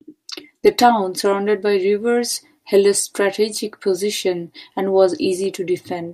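Bluetooth stutter at 5.44 to 5.46 s in this speech clip: a roughly 20 ms slice repeats where data went missing, consistent with one lost packet, then the speech resumes further on.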